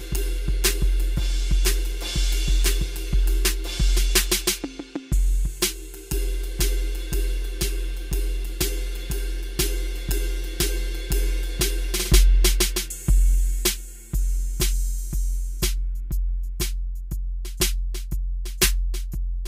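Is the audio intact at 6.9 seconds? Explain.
No. Channel delay with comb filtering is present at 6.9 seconds, as it is throughout the music. One channel arrives roughly 5 ms behind the other, and when the two are folded to mono, the content they share cancels at regularly spaced frequencies, the first near 100 Hz and the rest at even intervals above it. The result is a hollow, phasey tone, with those fixed notches thinning the low end and colouring everything above it.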